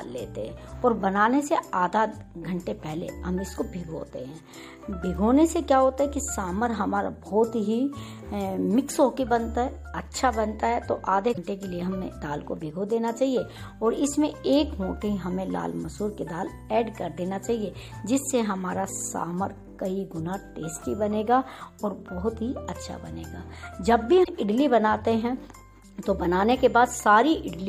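Damaged data in a compressed stream at 11.30–11.38 s and 24.20–24.29 s: corrupted frames throw the decoder out of sync, so each short stretch comes out as a brief chirp or blip.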